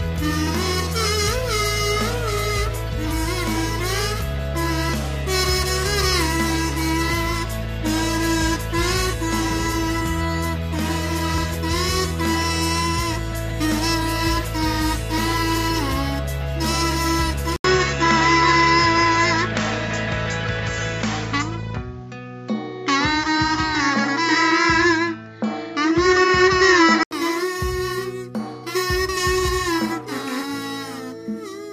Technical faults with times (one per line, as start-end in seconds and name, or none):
17.56-27.11 input switched to a poorer device